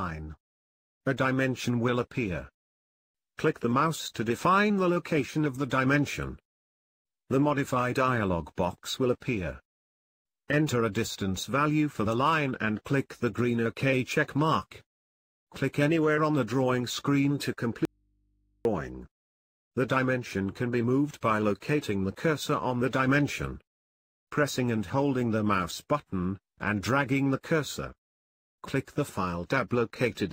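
At 17.85 s an audio dropout to a faint residue begins. For about 0.8 s, until 18.65 s, the sound cuts out abruptly, leaving only mains hum some 45 dB down, likely because the signal was lost while the path stayed live. The waveform collapses to a near-flat trace; the spectrogram empties except for thin low hum lines.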